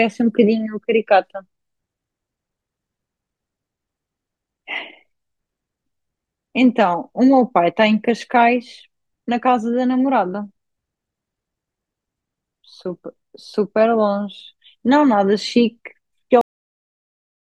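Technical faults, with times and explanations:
16.41 s, cut-off end: the speech stops mid-sound and drops straight to digital silence with no decay, because the final buffers were never written or played.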